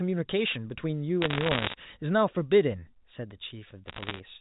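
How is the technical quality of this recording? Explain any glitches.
The recording has two short bursts of crackle over telephone-band speech that stops at 4 kHz. Bit errors on a digital phone line, at 1.22–1.74 s and 3.86–4.20 s: flipped bits, around a percent or so, each corrupt single samples, producing sharp ticks and crackle.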